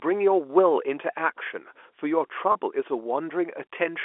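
At 2.52 s, packet loss with pitch repetition stretches about 30 ms of the speech, which fits a single lost packet. The receiver filled the gap by repeating the last pitch period, so the sound holds briefly with a faint buzz instead of dropping into the silent hole or click of a plain dropout. The telephone band of 300 Hz to 3.4 kHz from the G.711 coding can be heard throughout.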